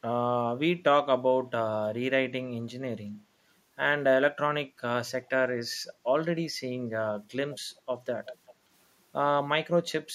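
A far-end echo canceller likely let loudspeaker pickup through, giving echo leak at 7.51–7.60 s and 8.26–8.54 s: faint copies of the speech, 380 ms late, about 20 and 15 dB down.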